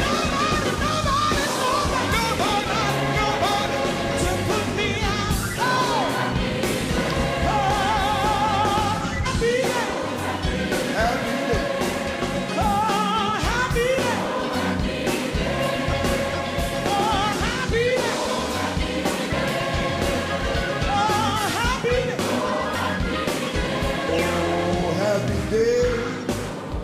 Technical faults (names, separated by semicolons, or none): compressed frames skipped